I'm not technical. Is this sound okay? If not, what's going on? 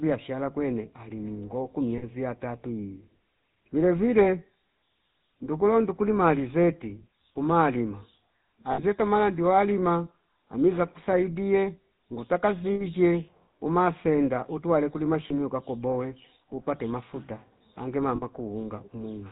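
No, not quite. The whole recording has gone through the GSM full-rate codec, the original digital phone-call system. It rebuilds the voice from a rough model of the throat driven by evenly spaced pulses, and it throws away everything above 4 kHz. So the speech sounds muffled and noticeably buzzy and gravelly from start to finish, like an old mobile call.

On top of that, there are a few spots of lost GSM frames, where bits of the call didn't arrive. The phone system papered over each gap by reusing the settings of the last good sliver of sound, so you hear a brief rough, metallic ring instead of the real sound. They're at 1.98 s, right after "kwene ali ningo ku" (about 40 ms); 8.72 s and 12.74 s (about 60 ms each); 15.28 s, between "umasenda utwale kulima" and "ka koboe upate mafuta" (about 20 ms); and 18.16 s, after "koboe upate mafuta ange" (about 60 ms).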